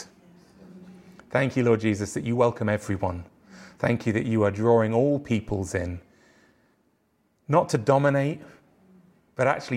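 At 5.49 s, right after "you are drawing all", a phantom power thump cuts in. It lasts until about 5.55 s. Someone switched the supply on or off while the input was live. That sudden voltage step passed through the coupling capacitors into the speech path. It sounds like a deep, dull thud. It peaks at about -25 dBFS. It then dies away quickly, fading over roughly 12 ms.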